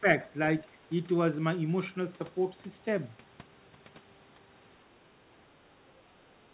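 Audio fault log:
0.0–0.07 s and 6.07–6.12 s, speech suppressed in double talk: The speech dips by about 10 dB for a few tens of milliseconds each time. This is likely the echo canceller mistaking overlapping talk for echo and attenuating this side's voice along with the echo. The call band stops at 4 kHz, which fits G.711 mu-law at 64 kbps.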